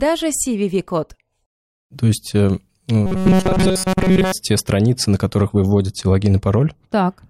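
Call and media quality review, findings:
Robotic sound from repeated short buffers, 3.06–4.32 s, after "есть э", before "те страницы на которых". Speech turns into a rigid metallic buzz at 188 Hz. Likely playout starvation: a roughly 5.3 ms block is replayed to fill gaps, and most of the real audio is skipped.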